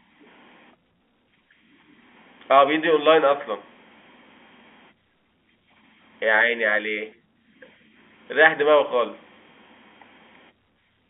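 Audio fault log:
The speech sits in a telephone band running from about 250 Hz to 3.5 kHz, consistent with a G.711 A-law line at its usual 64 kbps, with no fault to log.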